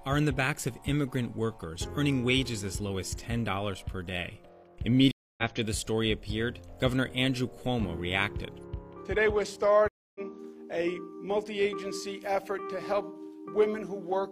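Two stream reconnects break the audio, at 5.11 to 5.44 s and 9.88 to 10.21 s. Each leaves about 270 ms of flat-line silence, then resumes further along (roughly 0.3 s, then 0.15 s) with a fresh decoder fading in, seen as a blank gap and abrupt content jump.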